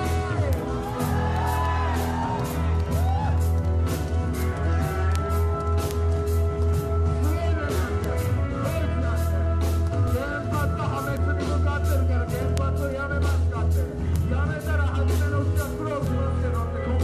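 Sharp single ticks occur at 0.53, 5.16, 5.91 and 8.04 s. These are bit error spikes. One flipped bit, across one to three samples, shifts the value by a power of two and straight back. Each tick is broadband and unrelated to the sound around it.

At 10.08 s there is a tiny skip. This is an overlap between stream segments. About 15 ms of audio was cut where two segments' time stamps overlapped. The waveform jumps across the gap.

More bit error spike ticks follow at 11.17, 12.58, 14.16 and 16.07 s. They sound the same as the earlier ones: brief, bright clicks with no link to the sound around them.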